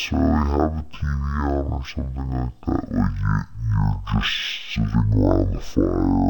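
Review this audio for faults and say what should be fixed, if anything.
Stereo read as mono throughout: interleaved left and right samples were read as one channel, so the speech plays at half speed, an octave low. Prevent this by opening the file with its correct channel count and deinterleaving the samples before playback.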